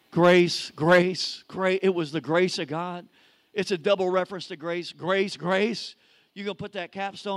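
A microphone input set too high is the likely cause of microphone overload in this speech recording: peaks run about 5 dB past the converter's limit from 0.23 to 0.41 s and about 6 dB from 0.89 to 0.99 s, flattening a small share of samples into a harsh, crackling edge on the loudest syllables. Software then likely lowered the microphone volume in single steps, by about 5 dB at 1.02 s, about 2 dB at 2.04 s and about 3 dB at 4.2 s, so voice and background drop together abruptly, the first step right after the distorted peaks.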